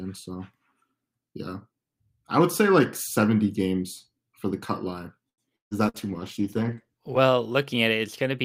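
At 5.29 s a short stall from a late packet holds the speech in place until 5.41 s. The receiver ran out of audio and stretched the last sound for about 86 ms. When the packet finally arrived, playback picked up exactly where it had stopped. Nothing is lost, which is what separates this from a loss burst: one sound simply lingers, and everything after it arrives 86 ms later.

From 5.56 to 5.74 s comes a burst of packet loss. About 180 ms of speech never arrives. The receiver fills the gap by continuing the last sound and fading it, so it thins out and then drops to near silence for roughly 140 ms. When speech returns it has jumped ahead, with a chunk gone. Playback also lands about 31 ms earlier, the opposite of the stall.

A second, shorter burst of packet loss follows from 5.89 to 5.97 s. Here about 60 ms is lost and patched with roughly 50 ms of fading continuation.

A call bitrate drop begins at 5.99 s. 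The encoder falls from 64 to 20 kbps and stays at the low rate for about 1.2 s. The speech turns coarse and muffled, with the upper frequencies shaved off, and it clears by 7.31 s. Unlike the loss bursts, nothing is skipped or held. Only the tone quality degrades, and it does so steadily over more than a second.

Overlapping that, from 6.08 to 6.75 s, a jitter buffer slow-down rebuilds the reserve. Repeated pitch periods stretch the stretch by 46 ms, so the speech plays at about 95% speed. The pitch stays the same. The stall freezes a single sound, while this slow-down drags a whole phrase evenly, and it overlaps the muffling of the bitrate drop.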